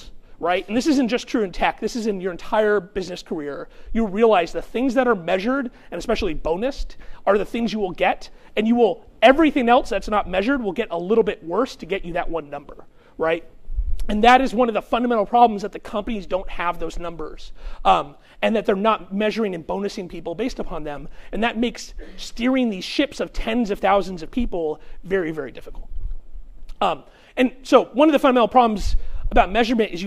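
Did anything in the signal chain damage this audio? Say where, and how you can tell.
No, nothing in the signal chain has damaged this audio. No stage from capture through to playback has left any mark that can be heard anywhere in the clip.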